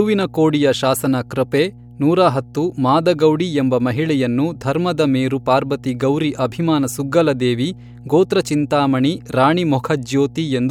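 Mains hum runs under the speech throughout: a steady 60 Hz tone with low harmonics, roughly 20 dB down, leaked from the power line, unlike irregular low-frequency rumble.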